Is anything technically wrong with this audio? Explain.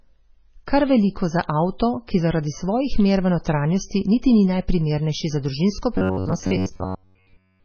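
Yes, there are two technical faults in this speech recording.

MP3 compression damage runs through the whole clip and is heavy. The sound has a watery, swirling quality, and s sounds and consonant attacks are smeared. This is the likely result of an MP3 encoder starved of bits, and the damage points to a very low bitrate around 16 kbps. With so few bits, the encoder zeroes weak frequency lines, which then flicker on and off from frame to frame.

Robotic sound from repeated short buffers begins at about 5.96 s, right after "ni najprimernejši za družinsko", and continues to the end. The speech turns into a rigid, metallic buzz pitched at 93.8 Hz that only loosely follows the syllables. The likely cause is audio arriving too infrequently. The playback side fills the gaps by looping the last segment, about 10.7 ms long. Most of this stretch is repeated material rather than fresh audio.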